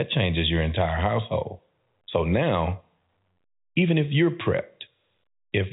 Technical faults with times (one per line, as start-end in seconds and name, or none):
none